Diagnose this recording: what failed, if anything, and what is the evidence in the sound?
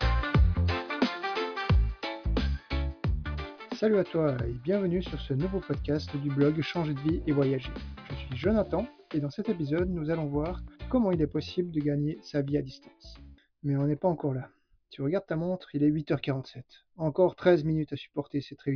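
Nothing failed in this recording.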